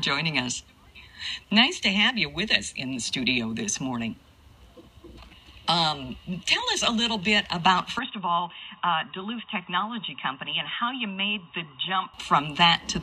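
At 7.99 s the recording likely switched its input to a poorer device, which stays in use until 12.14 s. That device passes nothing above 3.8 kHz, so the sound abruptly turns dull and boxy with no gap at the switch. It also arrives roughly 5 dB quieter and carries a faint new background noise well below the signal. At 12.14 s the full bandwidth and original level return just as suddenly.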